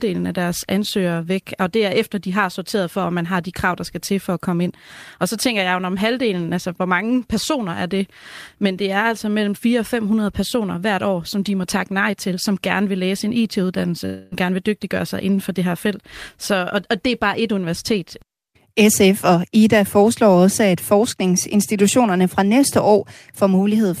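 It's a speech clip with one glitch: from 14.05 to 14.34 s the sound smears into a fading buzz, then picks up again with roughly a quarter second of content gone. That's likely a long network dropout, with the receiver papering over the gap rather than going silent.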